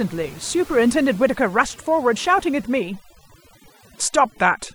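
Throughout, overdone noise removal mutes bands near the noise estimate, leaving twinkling specks rather than a gate's clean silence.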